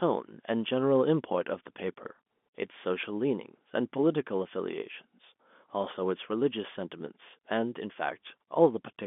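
No technical faults are audible.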